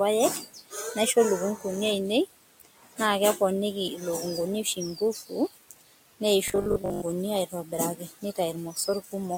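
It's a speech clip where the noise suppressor keeps cutting speech, at 0.4–1.16, 1.56–1.65, 2.26–3.0, 4.64–6.21, 7.49–8.38 and 8.73–9.14 s, dipping by up to about 18 dB so bits sound swallowed. There's also a robotic sound from repeated short buffers at 6.48–7.04 s: a stiff 50 Hz buzz, likely from about half the audio being replaced by repeats of a 20 ms buffer. Room noise sits about 20 dB under the speech.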